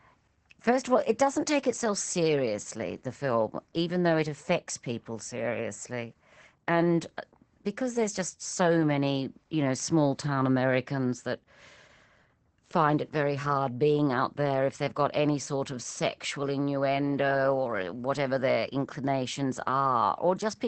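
From start to finish the speech carries Opus voice compression in its SILK linear-prediction mode. Nothing sounds above roughly 8.5 kHz, a wideband ceiling, and the coarsely coded excitation leaves the voice plainly muffled, hoarse and faintly robotic, which fits a bitrate near 12 kbps. Unlike a plain low-pass filter, which only dulls the top, this also roughens the voice's texture, and unlike MP3 damage it brings no swirly, watery treble.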